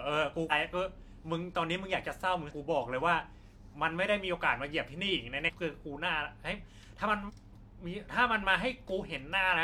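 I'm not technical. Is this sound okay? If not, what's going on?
No, not quite. There are five short glitches at 0.47–0.52, 2.47–2.52, 5.44–5.50, 7.25–7.31 and 9.52–9.56 seconds, each a brief chirp or blip in the speech, most lasting about a twentieth of a second and the last one even shorter. This is damaged data in a compressed stream. A few bits of the compressed file got scrambled, so the player briefly couldn't read that stretch and stumbled until it found its place again.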